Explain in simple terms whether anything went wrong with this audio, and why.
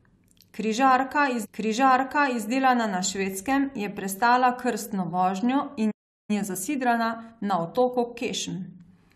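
Yes, a few things went wrong. At 1.44 s a stream segment repeated: about a second of speech plays again up to 2.44 s, because the player queued the same chunk twice. At 5.91 s there's a playback stall, the sound cutting out for roughly 0.38 s until 6.30 s, likely because the player ran short of data. Right after, from 6.30 to 9.10 s, time-compressed catch-up kicks in: the speech runs about 1.1 times faster at normal pitch, as the player trims its backlog.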